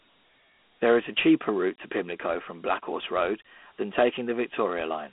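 It's a speech clip with Dialogic VOX ADPCM throughout: a phone-line band of 200 Hz to 3.4 kHz, nothing above 3.8 kHz, and plain gritty hiss riding the speech, which fits 4-bit coding at 32 kbps.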